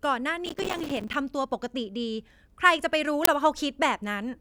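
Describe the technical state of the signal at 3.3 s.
An uninitialised buffer bursts from 3.25 to 3.27 s: stale memory is played as samples, giving loud digital noise filling one 23 ms block, unlike a single-sample click.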